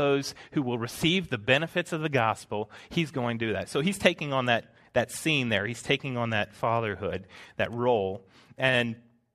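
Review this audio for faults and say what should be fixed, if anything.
Nothing stood out on listening, so there is nothing here that needs fixing.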